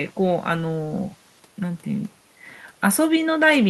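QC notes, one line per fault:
Nothing stood out on listening to this speech recording.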